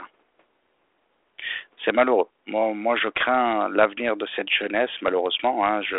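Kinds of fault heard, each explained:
Bit errors on an ADPCM link: corrupted bits on the adaptive differential link knock the decoder's step size and predictor off track, so each error keeps ringing briefly before the adaptation settles again. In this speech clip that appears as pops and a rough, crackling burst with brief jumps in level from 2.99 to 3.23 s, ending just before "l'avenir de cette". The error rate is low, around one bit in a thousand.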